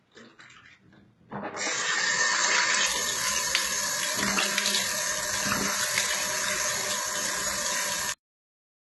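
From the start to 2.86 s, the audio is dull and narrow, with nothing above 7.6 kHz and a faint new noise floor. The likely cause is an input switched to a poorer device.

At 2.86 s the band opens with no gap, and the level shifts by about 5 dB.

Throughout, heavy HE-AAC compression likely shapes the sound. It cuts off above 11.7 kHz, and its synthetic treble sounds gritty and metallic, which fits a bitrate near 16 kbps.

At 8.12 s comes a cut-off end. The final buffers were lost, so the sound stops mid-event and drops straight to digital silence without decay.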